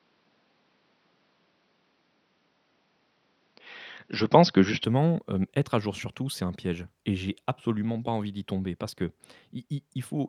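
Speech that sounds dull and boxy from the start, with nothing above 5.9 kHz and a level about 5 dB different, until it opens up cleanly at 4.84 s, just before "hem être à jour". The likely cause is an input switched to a poorer device.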